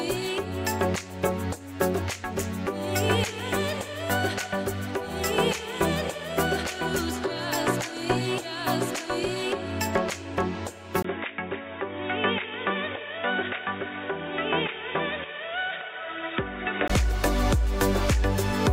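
At 11.02 s the sound drops out for about 20 ms, then returns dull and boxy, slightly quieter, with nothing above 3.8 kHz and faint new background noise far below it, until 16.90 s. The input likely switched to a poorer device, narrower and noisier.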